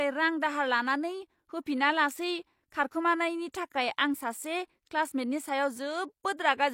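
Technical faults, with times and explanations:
3.52–3.54 s, pre-echo: right after "दाहार लानानै होफिनालासै खारखोमानायनि" a short hiss of about 22 ms runs ahead of an attack, because the codec's block noise spilled backward and softened it.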